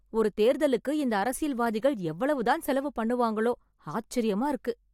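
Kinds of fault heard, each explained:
Nothing in this bit of speech sounds wrong to the ear, so there's no fault to name here.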